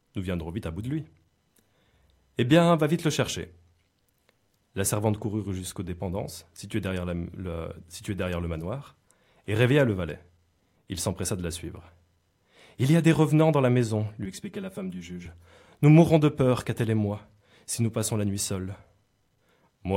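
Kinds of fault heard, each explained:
Channel delay (comb filtering): one channel lags about 5 ms before the mono sum, so the speech just after "dans la maison lui" turns hollow, with evenly spaced notches from about 100 Hz visible as stripes on a spectrogram.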